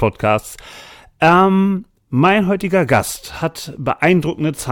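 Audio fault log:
0.45 to 4.23 s, word clock ticks: about seven single-sample clicks, roughly every half second through the speech, because the receiving device runs on its own clock, about 40 ppm off the sender's, and drops or repeats a sample each time the clocks slip.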